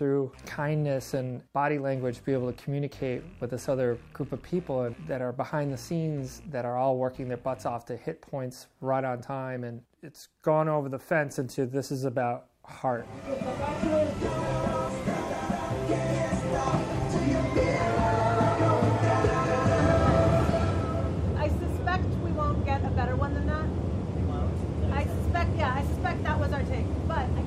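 Nothing technically wrong turns up anywhere in the audio, so there's nothing here to flag.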